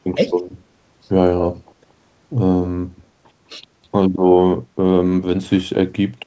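At 0.15 to 0.2 s the speech dips briefly, by around 10 dB, for roughly 50 ms. This is speech suppressed in double talk. Both ends were likely talking at once. The echo canceller could not tell the local talker from the loudspeaker echo. It turned everything down for a moment, and the voice sinks.

Echo leak follows at 0.29 to 0.42 s and again at 1.42 to 1.49 s. A delayed copy of the voice comes back about 0.2 s late. The far end is likely playing the call on a loudspeaker. Its canceller did not remove all of the sound its microphone picked up, so the leftover returns as echo. The first scrap is very faint, well below the speech. The second is much stronger, roughly 10 dB under the speech, and it is heard as a short repeat.

Nothing comes through above 8 kHz. That fits a wideband call codec.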